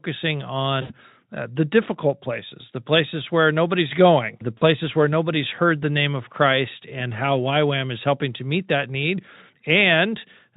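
Right at 0.81 s the speech drops into VoIP packet loss concealed by the speech codec, running to about 0.94 s. That gap of roughly 80 ms fits about four 20 ms frames going missing, so the decoder keeps extending its last pitch and filter, and you hear a buzzy or noisy, fading smear that stays a bit weak after the stream returns. A shorter repeat hits at 4.57 to 4.64 s, about 40 ms, around two frames. The Speex coding itself sounds clean.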